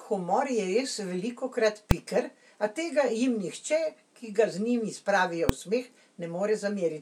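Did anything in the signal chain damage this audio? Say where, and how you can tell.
Yes. Invalid numbers at full scale in the processing stage produce two sharp bangs at 1.91 s, after "humor je res velikokrat", and at 5.49 s, after "njim spravijo". An infinite or undefined result was clamped to maximum amplitude for one short block, which fits 128-sample and 64-sample buffers.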